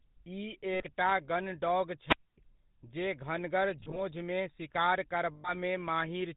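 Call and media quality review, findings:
GSM full-rate codec, whole clip: buzzy, gravelly speech, nothing above 4 kHz. The sound points to 13 kbps GSM full rate, a vocal-tract model driven by a sparse pulse excitation, so the fine detail is gone and the roughness is plainly audible.

Lost GSM frames at 0.74–0.85 s, 3.80–4.00 s and 5.34–5.51 s: rough metallic ringing where the decoder stretched the last good frame. The first fits about 60 ms lost, the last about 100 ms. The middle one is short single-frame gaps scattered across roughly 160 ms.

Wireless microphone squelch dropout, 2.04–2.38 s: static swells as the FM link fades, then the receiver squelch mutes for about 250 ms of near silence before the speech comes back. The cause is the radio mic's RF path, not the codec.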